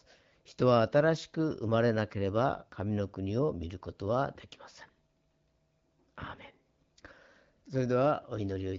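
No technical faults can be heard in the speech; it has the band-limited character of AMR wideband (HD Voice) coding at 12.65 kbit/s, which leaves it clear.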